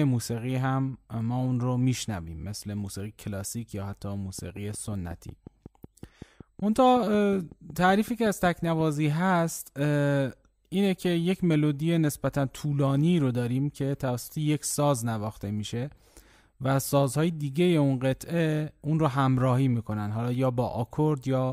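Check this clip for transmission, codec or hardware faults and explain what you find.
There's one fault here, a train of clicks. From 4.39 to 8.81 s, around thirty evenly spaced clicks tick at 5.4 per second, about as loud as the speech. That's likely interference or a struggling interface.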